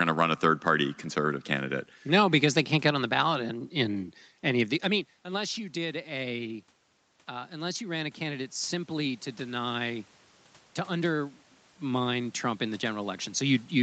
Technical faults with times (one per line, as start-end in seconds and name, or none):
7.30-10.13 automatic gain rising